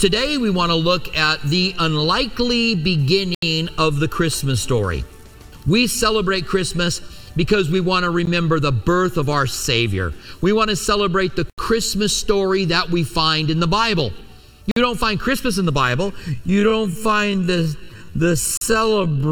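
At 3.35 s the audio drops to silence for 79 ms and then resumes, and the same dropout recurs at 8.25 s (16 ms), 11.50 s (81 ms), 14.71 s (50 ms) and 18.57 s (42 ms). These gaps have the signature of a Bluetooth stall, likely caused by radio interference delaying packets until the receiver's buffer emptied. Playback halts cleanly and carries on from the point where it stopped once the retransmitted data arrives.

From 16.28 s to the end the pacing abruptly slows to about 0.54 times the original rate while pitch stays unchanged. This is a time-stretched section, likely produced by software lengthening the audio by repeating short segments to preserve pitch. At nearly half speed the audio drags across the final three seconds, with the 18.57 s stall falling inside it.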